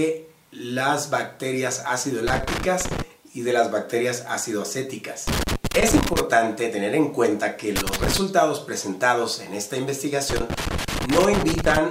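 Four bursts of loose connector crackle break up the audio, at 2.28–3.02 s, 5.27–6.20 s, 7.76–8.18 s and 10.30–11.77 s. Each is an irregular scratchy patch where a worn or dirty contact keeps making and breaking, chopping the signal.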